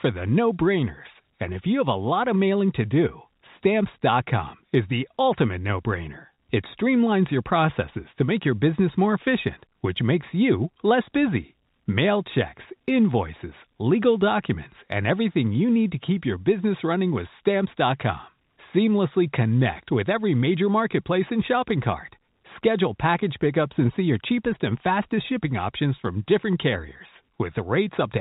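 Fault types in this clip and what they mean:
Packet loss with pitch repetition: a brief held, buzzy tone from 6.34 to 6.38 s, where 40 ms went missing and the last pitch period was repeated to bridge it.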